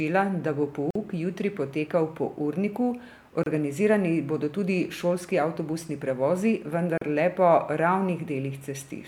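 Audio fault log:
0.91–7.01 s, gap at a join of encoded pieces: separately encoded segments were joined without trimming encoder start delay or last-frame padding. Gaps of 49 ms at 0.91 s after "da bo", 28 ms at 3.43 s and 38 ms at 6.98 s open in continuous speech, with smeared edges, before it resumes where it stopped.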